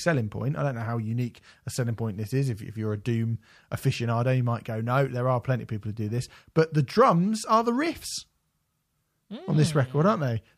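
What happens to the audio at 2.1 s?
Nothing goes wrong at 2.1 s: the speech plays through that moment intact, with no dropout, click or other fault.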